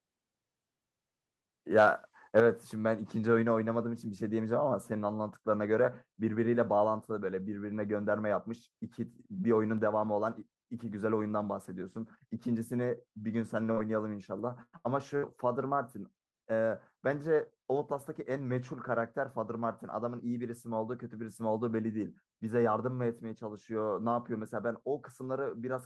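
A harsh, crackling edge lands on the loudest peaks from 1.78 to 1.88 s and again from 2.37 to 2.40 s, with the tops pushed roughly 4 dB and 3 dB past the ceiling and a small share of samples flattened. This is likely microphone overload: the input level was set so high that the converter ran out of headroom and sliced off the waveform crests, turning clean peaks into gritty distortion.

Right at 2.40 s, just after that second distorted peak, everything drops abruptly by about 6 dB, with the voice and the background both falling together in one step rather than fading. The likely cause is the microphone volume being stepped down: the calling software reacted to the clipping by cutting the device's input gain in a single jump, so the level stays lower from that point on.

Between 13.71 and 15.25 s the speech breaks up four times, at 13.71 to 13.79 s, 14.63 to 14.75 s, 14.77 to 14.87 s and 15.17 to 15.25 s. 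Each time the last sound is stretched into a held buzz or fading hiss lasting roughly 50 to 100 ms, and in the 14.63 s break it dies away into about 50 ms of silence. The speech then picks up further along, with about 60 to 100 ms of audio skipped each time. These are bursts of packet loss. Consecutive packets never arrived in time, so the receiver extended and faded the previous audio to cover each gap.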